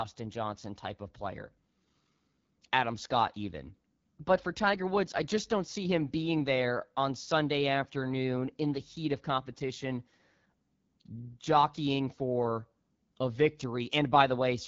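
From start to finish the speech carries the AMR wideband (HD Voice) codec sound, with nothing above 7.5 kHz. The damage is plainly audible: a rough, raspy grain, which points to one of the codec's lowest modes, 8.85 kbit/s. What separates it from narrowband phone coding is the retained top octave of sibilance. What separates it from a simple low-pass filter is the hiss-like, noise-filled upper band and the buzzy, synthetic texture of the voice itself.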